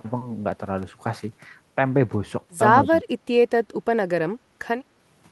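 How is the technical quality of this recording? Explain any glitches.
The recording has several short glitches: a cluster of clicks early on, a brief echo-and-ducking episode near the middle, and one background dropout near the end. The speech passes through a call codec that limits it to about 12 kHz, which fits Opus at roughly 32 kbps.

From 0.52 to 1.29 s there are CD scratch ticks: six sharp ticks, the longest about 2 ms. Each is a rebuilt or muted sample run after a disc blemish. They show as thin vertical lines on a spectrogram.

From 2.84 to 2.93 s there is an echo leak, likely from a loudspeaker echo canceller that let residue through. It is a faint copy delayed 153 ms, around 30 dB down, and appears as a weak smeared duplicate of the speech energy.

From 2.84 to 3.06 s the speech is suppressed in double talk. The canceller, likely confused by both sides talking at once, ducks the talker by about 15 dB for around 150 ms. 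This shows as a visible dip in the waveform envelope.

From 4.45 to 4.57 s the background is gated by the echo canceller. The room tone is pulled down about 15 dB for roughly 100 ms, leaving a short dark gap in the spectrogram's noise floor.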